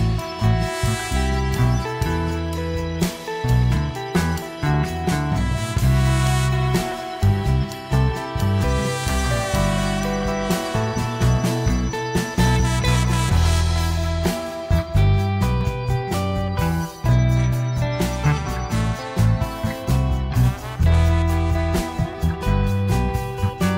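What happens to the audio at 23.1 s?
Nothing goes wrong at 23.1 s; the audio there plays through cleanly, with no dropout, click or other fault.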